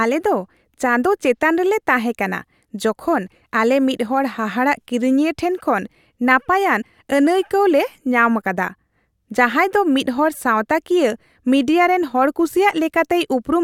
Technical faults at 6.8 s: compressed frames skipped

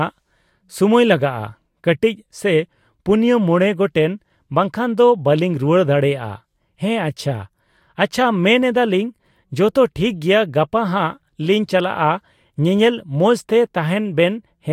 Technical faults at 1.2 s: none

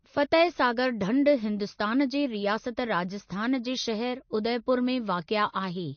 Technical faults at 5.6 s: MP3 compression

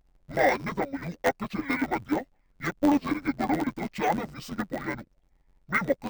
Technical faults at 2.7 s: interleaved audio read as planar

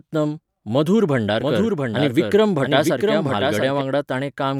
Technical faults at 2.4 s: doubled audio track

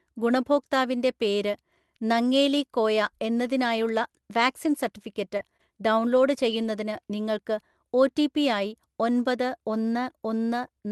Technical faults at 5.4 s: short concealed packet loss; lost packet rebuilt from error correction

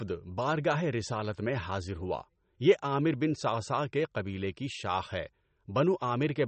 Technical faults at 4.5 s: MP3 compression

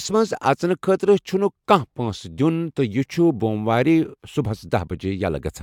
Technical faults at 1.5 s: none

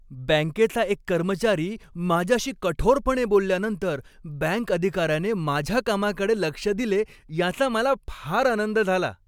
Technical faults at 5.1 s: none

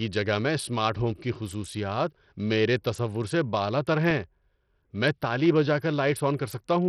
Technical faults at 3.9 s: Bluetooth SBC compression; CD scratch ticks

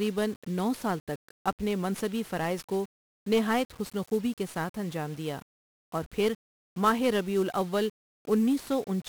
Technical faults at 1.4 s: 1-bit DFPWM compression

